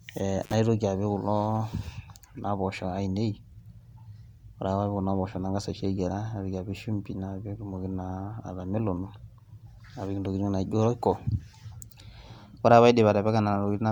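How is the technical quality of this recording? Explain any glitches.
The technical quality is compromised by a persistent codec fault and one brief dropout near the start.

Generation loss runs throughout: the speech sounds swirly, smeared and hollow, with softened consonant attacks, and nothing remains above 20.2 kHz. This most likely comes from about three successive MP3 passes at 128 kbit/s, each requantising on a shifted frame grid and compounding noise and spectral holes.

An intermittent contact fault occurs between 0.42 and 0.54 s. A loose connection briefly opens, cutting the signal for about 52 ms, leaving faint hiss during the gap, with crackle at both edges as the contact breaks and remakes.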